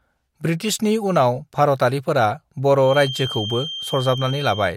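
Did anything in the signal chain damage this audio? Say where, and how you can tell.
Yes. A feedback whistle enters at 2.77 s and runs to the end of the clip. It is a thin, steady tone at 3.2 kHz. It sits about 10 dB below the speech and swells and fades slowly in level. It never grows or runs away. The likely stage is the acoustic loop at playback, where a loudspeaker feeds back into the microphone. That loop is held just at the point of feedback, so one frequency keeps ringing on its own.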